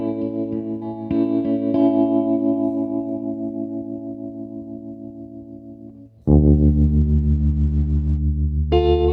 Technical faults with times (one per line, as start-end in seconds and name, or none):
6.54-8.25 call bitrate drop